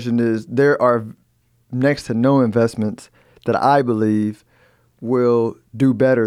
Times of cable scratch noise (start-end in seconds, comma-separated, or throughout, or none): none